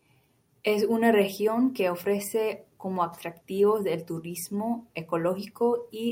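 No technical faults can be heard anywhere in this speech recording. Nothing in the audio stands out as a problem at any point.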